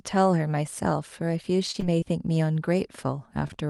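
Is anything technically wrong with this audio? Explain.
Yes, there are packet delivery faults in this speech clip. At 1.71 s, a short stall from a late packet: the jitter buffer ran dry and the receiver held the last sound for about 26 ms until the packet arrived, so nothing is lost but the sound drags briefly. Short concealed packet loss follows at 1.80 s, 2.00 s and 3.48 s, each time about 20 ms that never arrived, which the decoder papered over by extending the preceding sound, leaving a brief smear or wobble.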